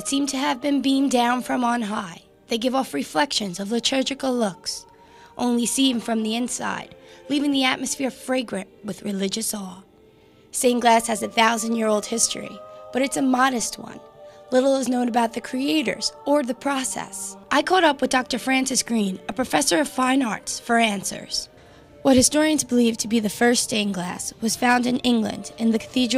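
At 13.60 s and again at 19.32 s the zero line of the waveform suddenly shifts, a DC step of about -32 dBFS each time. Each jump lands as a short low thump, and the offset then drains away as a 20 Hz high-pass pulls the baseline back toward zero. Unlike a dropout or a click from a damaged sample, the sound itself carries on uninterrupted; only the baseline moves and then settles.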